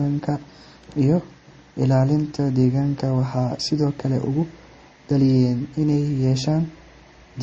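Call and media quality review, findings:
Transcoding between lossy codecs, throughout: no content above about 8.4 kHz, two layered artefact textures. Likely cause: a low-rate MP3 stage, then Opus re-encoding its artefacts.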